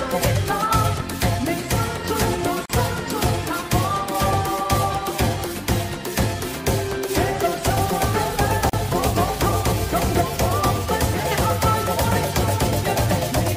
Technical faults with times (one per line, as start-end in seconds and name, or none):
2.66-2.70 gap at a join of encoded pieces
8.70-8.73 gap at a join of encoded pieces